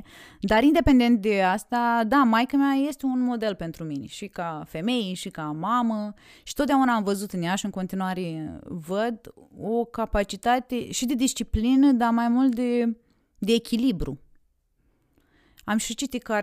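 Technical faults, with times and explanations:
No technical faults occur anywhere in this speech recording. Nothing in it breaks, drops out or distorts at any point.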